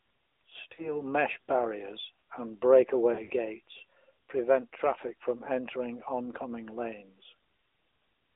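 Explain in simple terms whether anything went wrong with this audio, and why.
AMR narrowband mobile codec, throughout the clip. The speech went through the kind of audio compression used on older mobile phone networks. Instead of sending the sound itself, it sends a rough model of the voice, rebuilt from a few pulses at a time. Only the range from about 300 Hz to 3.7 kHz survives, so the voice sounds muffled and thin, with a plainly buzzy, synthetic edge, like a phone call.

Lost AMR speech frames, at 0.74 to 0.89 s and 3.14 to 3.32 s. Small chunks of the signal failed to arrive intact, so the phone decoder guessed by repeating the last good sound at lower volume. The first dip comes just before "mesh barriers and" and fits about 40 ms of missing audio, heard as a brief warble. The second follows "mesh barriers and", with losses scattered over about 160 ms and a longest gap of 60 ms. The sound smears and fades, then returns rough for a moment.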